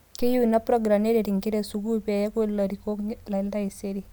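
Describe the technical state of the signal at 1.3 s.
At 1.3 s the speech signal is intact, with no audible fault at that point.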